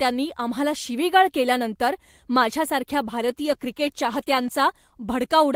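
After "शिवीगाळ केल्यानंतर माझ्यासारख्या", from 3.27 to 4.69 s, a call bitrate drop makes the speech rough, watery and dulled. The coarseness fits the encoder falling from about 32 to 13 kbps. Unlike packet loss, the sound stays continuous, with no gaps or clicks.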